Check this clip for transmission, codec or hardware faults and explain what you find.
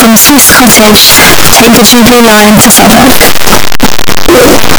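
Signed and unsigned mixed up, throughout the speech: the 16-bit samples were likely read with the wrong sign convention, flipping the top bit so every zero crossing leaps across the full range. The result is loud, harsh distortion, with quiet stretches as loud as the rest.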